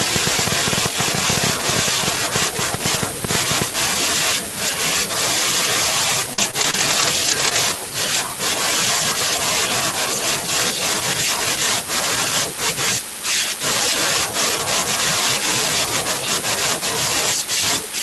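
From 0.01 to 3.63 s a train of clicks runs over the speech: around forty sharp ticks, roughly ten per second at an irregular pace, each much the same shape and standing out well above the speech level, about 15 dB. They carry on through pauses, which separates them from codec or dropout artefacts tied to the signal. The likely cause is electrical interference or a faulty connection or power supply injecting pulses.

Between 6.33 and 7.57 s repeated packet loss gives a choppy, robotic stretch. Five short holes, the longest about 44 ms and about 110 ms missing in total, are each bridged by stretching the preceding sound, so around a fifth of a second is rebuilt. Unlike the clicks, these faults are tied to the speech itself: brief robotic smears and stutters rather than added pops, and they stay inside this span. The Opus call path's roughly 12 kHz top end holds throughout.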